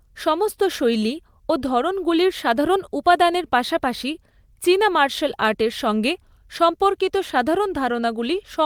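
No technical faults are audible.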